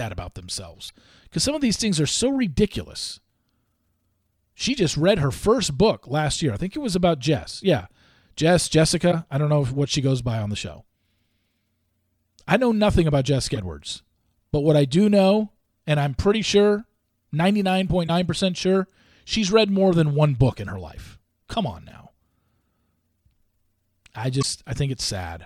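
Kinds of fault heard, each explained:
Damaged data in a compressed stream: corrupted bytes make the decoder misread frames and lose sync, giving five brief glitches of about 55 ms at 0.85, 9.08, 13.52, 18.04 and 24.39 s.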